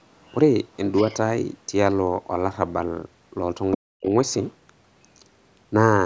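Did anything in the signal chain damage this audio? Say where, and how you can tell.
Yes. The call processing's echo canceller likely left residue of the far end's loudspeaker signal in the microphone path, so a second voice bleeds through in brief scraps at 0.22–0.36 s, 0.94–1.15 s, 3.72–3.76 s and 4.31–4.46 s. The first and last are faint, around 35 to 40 dB under the talker. The middle two are stronger, roughly 15 to 20 dB down, as other side's voice leaking through behind the near talker.

The same stage then mishandled double talk. At 3.76 s, the suppressor seemingly treated the overlapping near-end speech as echo and clamped it down. The result is speech suppressed in double talk from 3.76 to 4.13 s, about 0.4 s in all, where the talker's level plunges by about 40 dB. The band-limited top end, with nothing above 8 kHz, comes from the call path's normal filtering.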